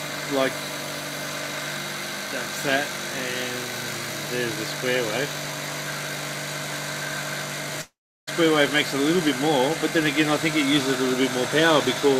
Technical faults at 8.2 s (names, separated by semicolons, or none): long network dropout